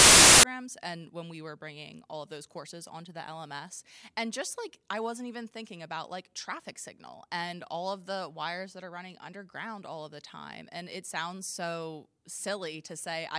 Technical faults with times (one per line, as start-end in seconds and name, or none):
0.00-0.43 file tags played as audio